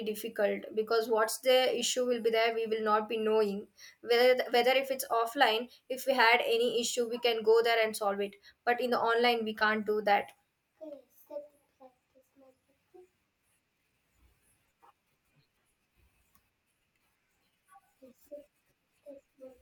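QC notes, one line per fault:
No faults heard anywhere in this speech recording.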